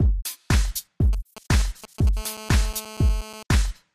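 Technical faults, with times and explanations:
1.13–2.09 s, GSM signalling bursts: a galloping dit-dit-dit run of brief raspy buzzes at about 217 Hz, sitting roughly 15 dB below the sound. A 2G phone close by is sending short groups of radio bursts while it signals to the network, as when a call or message is being set up. Each burst is rectified in the audio circuit, so the radio pulses arrive as short buzzes that have no relation to the sound.
2.17–3.43 s, GSM phone buzz: a steady, harsh, rasping buzz at about 217 Hz, rich in harmonics and about 18 dB below the sound. The nearby phone is now in a call and transmitting continuously in bursts 217 times a second. The audio circuitry demodulates that pulse train, producing an unbroken buzz at the burst rate whose jagged waveform spreads energy across many harmonics, independent of the sound itself.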